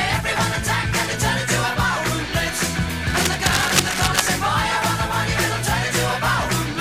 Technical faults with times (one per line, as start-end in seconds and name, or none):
3.07-4.21 cable scratch noise